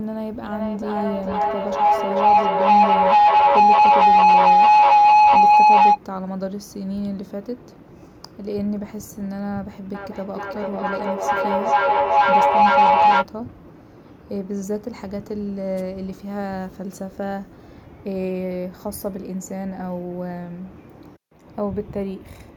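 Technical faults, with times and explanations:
0.44–6.01 s and 9.95–13.28 s, feedback howl: two devices on the call loop microphone to loudspeaker with rising gain, building a tone near 1 kHz with a loop delay of about 0.4 s, peaking about 14 and 13 dB above speech.
15.76–15.82 s, wireless microphone noise hit: the analogue radio link fades as reflections cancel, so receiver noise rises briefly and is heard as a short burst of static.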